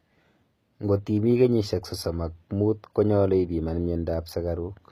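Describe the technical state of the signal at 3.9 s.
At 3.9 s the speech has the same fault present throughout: gritty, metallic s sounds. The likely cause is HE-AAC compression at a low bitrate near 20 kbps, with the treble rebuilt from copied lower bands. A spectrogram would show smeared, repeated patterns above a sharp crossover, with harmonics that don't line up.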